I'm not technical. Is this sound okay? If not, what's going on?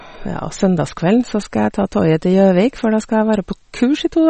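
No, not quite. All the way through, the speech has a thin, watery quality, and the crisp top end is missing, with nothing at all above about 8.4 kHz. That's most likely MP3 compression squeezed down hard. To save space, the encoder throws away the treble and the quieter details it thinks you won't miss. At this level you can clearly hear what's gone, especially on s sounds, which lose their sparkle and get a swirly edge.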